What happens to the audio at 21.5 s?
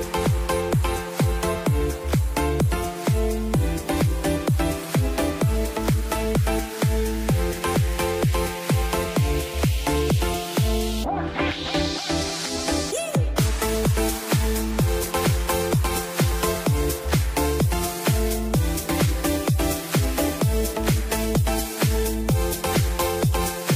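Nothing goes wrong at 21.5 s; the audio plays through that moment intact, with no dropout, click, distortion or other fault.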